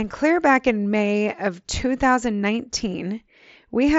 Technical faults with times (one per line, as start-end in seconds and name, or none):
none